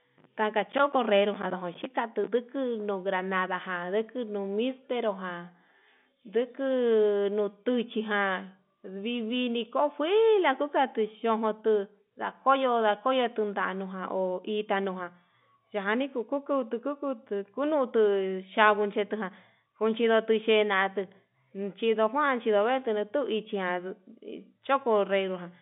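No technical faults can be heard in this recording.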